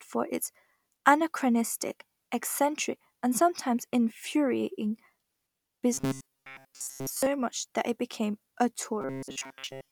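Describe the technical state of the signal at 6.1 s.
At 6.1 s the speech has robotic sound from repeated short buffers, running 5.94 to 7.27 s, just before "much that it became". It is likely caused by replaying one short chunk of about 7.5 ms, repeated through most of the span, forcing a rigid metallic 134 Hz buzz. A spectrogram shows flat, evenly spaced harmonics, and the waveform shows identical repeating cycles.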